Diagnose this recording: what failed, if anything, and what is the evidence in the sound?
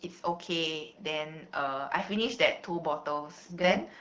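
Nothing failed here: the speech simply rides an AMR wideband (HD Voice) link at 12.65 kbit/s, and the codec leaves only a light mark on it, which is what that rate should give.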